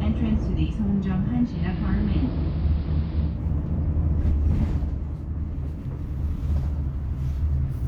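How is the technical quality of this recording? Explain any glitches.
The recording has one glitch. From 1.41 to 3.43 s there is digital radio blending to analogue. The receiver lost its digital stream and cross-faded over 0.22 s to the station's AM broadcast. The treble is cut, so the audio turns dull. A faint hiss rises, roughly 30 dB below the signal. The level does not jump. At 3.43 s the receiver blends back to digital.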